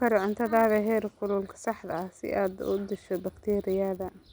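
Throughout the speech, a resampler restarted on every block adds a buzz. Each 10 ms block was converted alone, likely from 24 kHz to 48 kHz, so every block edge carries a small error. These errors repeat at 100 Hz and sound only while speech is present.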